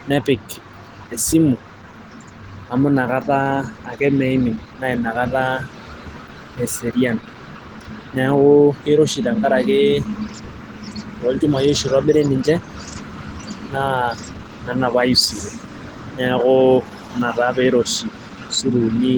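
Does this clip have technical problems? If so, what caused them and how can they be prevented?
Yes. Throughout the speech there is plainly audible coarse, hoarse, muffled texture with grainy noise where fine detail should be, most likely from Opus compression. The grain and hoarseness fit a low bitrate around 16 kbps in the speech-oriented hybrid mode. On a spectrogram, content still reaches about 20.1 kHz, but the upper bands look smeared and noise-filled rather than finely structured. To prevent it, encode at a higher Opus bitrate.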